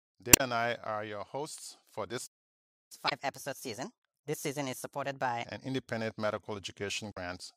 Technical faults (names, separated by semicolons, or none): damaged data in a compressed stream; playback stall; catch-up at higher speed